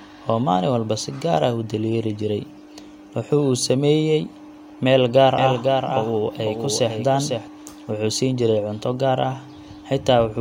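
A doubled audio track runs from 5.38 to 7.48 s, just after "meel gaar": a second, somewhat quieter copy trails about half a second behind, starting and stopping abruptly, likely from a second capture path.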